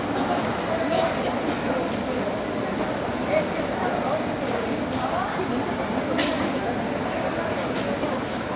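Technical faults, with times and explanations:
Nothing here stands out as a fault; the sound simply carries the narrow telephone-band character of a call line, with nothing above 4 kHz, which fits a G.711 A-law connection at 64 kbps.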